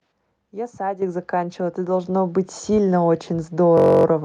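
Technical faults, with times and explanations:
1.02 s and 2.04 s, microphone volume stepped up: the call software judged the microphone too quiet and raised the device's input gain in a single jump each time, by about 8 dB and then by about 5 dB. Because the change happens at the input, the speech and the background noise behind it get louder together and instantly, with no fade. The result is two abrupt steps in overall level rather than a gradual rise.
3.78 to 4.05 s, system hang loop: the computer or its audio driver stalled while the sound hardware kept reading the same ring buffer. One 21.33 ms slice of audio, which fits a 1024-sample buffer, repeats 13 times back to back. Because the slice is so short, the repetition merges into a steady buzz at 46.9 Hz, the loop rate, in place of the moving speech until normal playback resumes.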